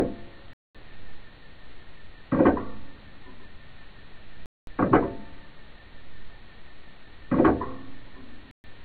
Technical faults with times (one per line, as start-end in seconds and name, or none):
0.53-0.79 digital broadcast dropout
4.46-4.71 digital broadcast dropout
8.51-8.69 digital broadcast dropout